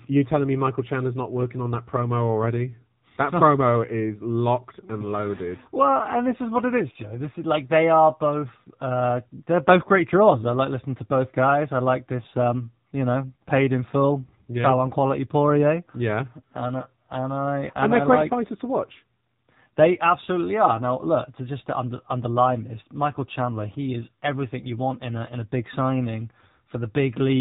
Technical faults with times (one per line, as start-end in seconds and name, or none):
0.00-27.40 AMR narrowband mobile codec